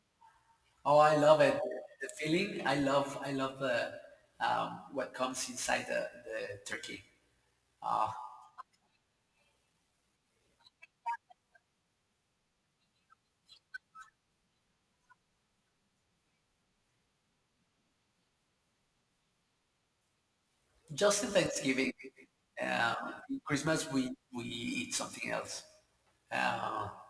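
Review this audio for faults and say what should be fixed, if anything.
Aliasing runs through the whole speech recording. The sample rate was cut without an anti-aliasing filter first, which fits a conversion from 48 kHz down to about 22 kHz. Energy above the 11 kHz fold point has mirrored back down into the band as false, unrelated tones, sitting roughly 25 dB below the speech. Sibilants sound gritty and metallic. On a spectrogram, the speech energy runs hard up to the 11 kHz edge with no roll-off, and mirrored traces of high-frequency content appear below it. To prevent this, resample with a proper low-pass filter just below half the new rate, or go back to the original 48 kHz source.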